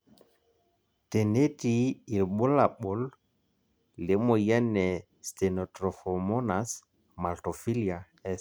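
No technical faults can be heard anywhere in the recording. The speech carries on from its first moment to its last with nothing that calls for comment.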